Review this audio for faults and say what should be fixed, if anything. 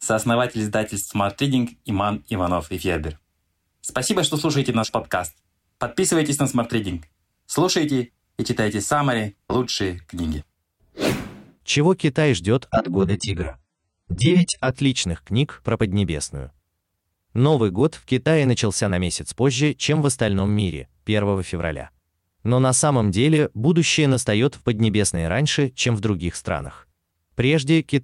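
An adaptive stream at a lower bitrate runs from 12.71 to 14.71 s. Treble vanishes abruptly, leaving a spectrogram shelf at 9.7 kHz with smeary artefacts, fitting roughly 16 kbit/s AAC. Prevent it with a larger buffer or a minimum bitrate so the player doesn't switch down.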